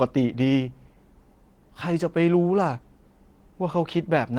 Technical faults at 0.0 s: none

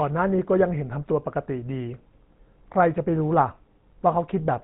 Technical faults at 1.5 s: GSM full-rate codec

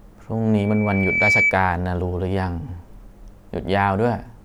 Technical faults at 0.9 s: loudspeaker feedback squeal

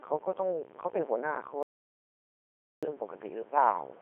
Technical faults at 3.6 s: Codec 2 vocoder

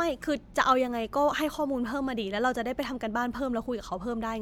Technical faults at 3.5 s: none

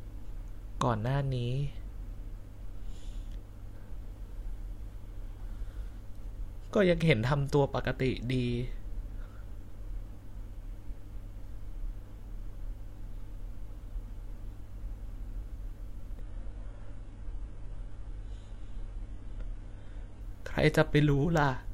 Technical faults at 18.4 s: adaptive stream at a lower bitrate

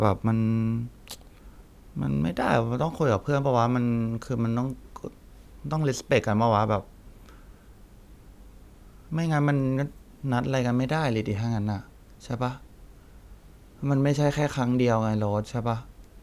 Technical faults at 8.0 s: none

